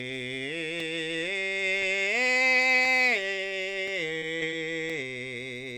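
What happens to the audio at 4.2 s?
A short stretch of this music, about 20 ms, failed to reach the decoder in time between 4.19 and 4.24 s, so this is short concealed packet loss. The receiver extrapolated the preceding sound for about 25 ms and cross-faded back, leaving a brief smear or wobble.

Around it, a background task is periodically stalling the USB bus or audio driver. These are periodic USB or driver dropouts, running from 0.80 s to the end every 1.02 s. Each stall drops a little audio to silence, heard as regular ticks against the music.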